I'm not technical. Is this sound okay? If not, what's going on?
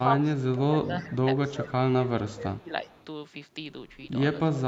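No, not quite. Three times the speaker's voice dips: from 0.02 to 1.27 s, again from 1.54 to 1.81 s, and from 1.97 to 2.72 s. The last dip is the deepest, and the middle one is the mildest. This is speech suppressed in double talk, most likely from both people talking at once. The call's echo-cancelling system couldn't tell this voice apart from the other person's voice coming out of the loudspeaker, so it turned everything down for a moment.

Then, from 2.87 to 3.05 s, there's a very faint, short repeat of the voice that trails the original by about 368 ms. That's echo leak, likely from someone using a speakerphone. Their microphone picked up some of the sound from their own speaker, and their echo canceller didn't clean all of it out, so a little of it came back down the line as a quiet echo.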